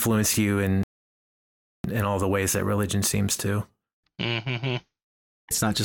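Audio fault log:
0.83–1.84 s, rebuffering stall: the speech cuts abruptly to silence for about one second, then resumes exactly where it broke off, with nothing skipped. The player had run out of downloaded audio and waited for more to arrive, stretching playback by 1.01 s.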